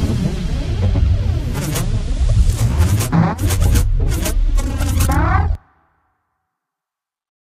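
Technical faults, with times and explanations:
No technical faults can be heard in this sound recording, and there is no audible disruption from any stage of capture or playback.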